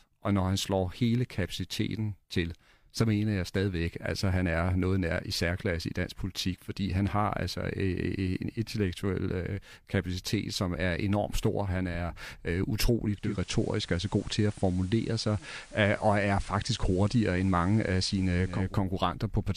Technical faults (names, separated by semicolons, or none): digital radio blending to analogue